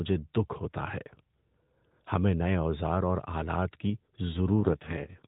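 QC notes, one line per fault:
4.60–5.27 s, AMR rate drop: the narrowband speech abruptly turns buzzier and more synthetic, with no gap and no change in bandwidth. This fits the network switching the codec from about 12.2 kbps to 4.75 kbps, leaving fewer pulses to model each frame.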